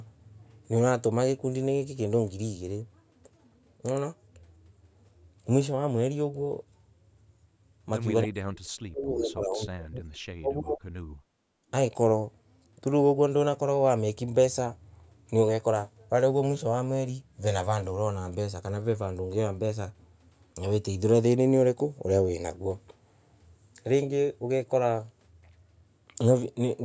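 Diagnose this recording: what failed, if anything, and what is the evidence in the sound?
Between 8.24 and 10.81 s the speech sinks hard, dropping by something like 40 dB at its deepest. That's speech suppressed in double talk, likely at the call-processing stage: the echo canceller couldn't tell the local talker from the loudspeaker echo while both sides were talking, so it pulled everything down.

Right after, from 11.2 to 11.68 s, the room sound ducks by about 18 dB and then comes back. That's background gated by the echo canceller. It clamped the mic while the far end was playing, then released. The call's mic processing caps everything at 8 kHz, which is normal for that path.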